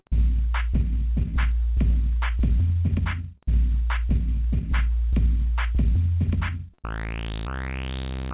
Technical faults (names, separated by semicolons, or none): short concealed packet loss